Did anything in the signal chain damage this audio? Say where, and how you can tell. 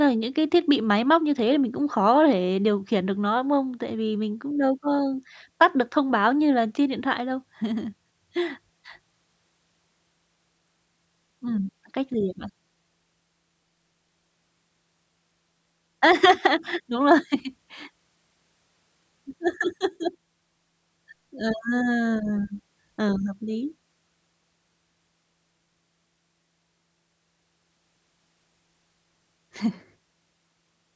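No, nothing in the signal chain damaged this audio.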